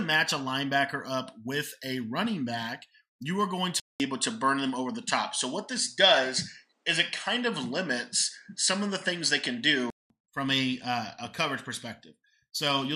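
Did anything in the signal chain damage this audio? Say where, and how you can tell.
Yes: input switched to a poorer device at the driver stage, 3.8 to 10.1 s. A 200 ms gap, then nothing above 10.2 kHz and shifted level, likely another microphone.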